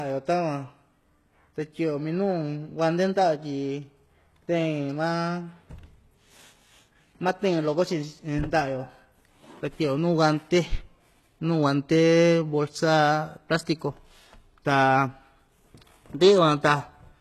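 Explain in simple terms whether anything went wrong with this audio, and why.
Yes, throughout the speech the s sounds turn gritty and lispy with nothing above 12.3 kHz, likely from heavy HE-AAC compression rebuilding the treble from lower tones.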